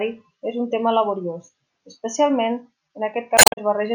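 At 3.35 s, near the end of the speech, damaged data in a compressed stream disrupts playback until 3.58 s. Corrupted bytes leave the decoder unable to read those frames. It loses sync and hunts for the next valid header. The result is a short chirp, squawk, click or hole.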